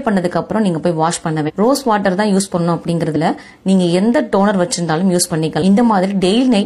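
The audio has damaged data in a compressed stream at three points. Short glitches sound at 1.44 to 1.51 s, 3.12 to 3.17 s and 5.58 to 5.62 s. Each lasts about 50 to 65 ms and comes out as a brief chirp or blip. Here, bytes in the encoded stream were corrupted. The decoder misreads those frames and loses sync. It then hunts for the next valid frame header, and output resumes.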